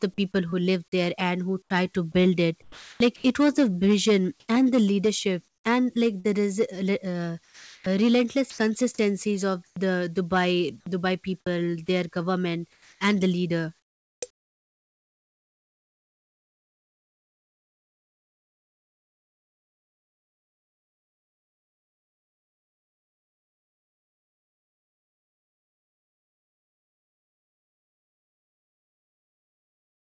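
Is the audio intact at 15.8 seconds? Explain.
No. Around 15.8 s the speech is choppy, with quiet syllables and word edges dropping into a flat hiss. This is likely sound chopped by the voice detector, which from 0.50 to 30.13 s replaces about 18 s with synthetic comfort noise.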